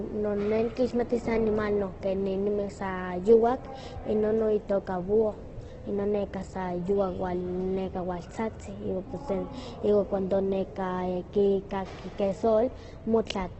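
Throughout, the speech is grainy, rough and cut off above 8.2 kHz, likely heavy Opus compression: starved bands get filled with noise rather than left empty, so there's less MP3-style swirl.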